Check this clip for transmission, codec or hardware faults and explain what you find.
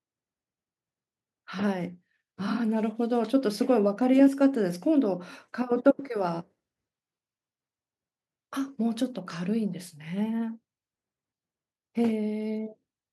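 Nothing wrong turns up anywhere in this speech recording.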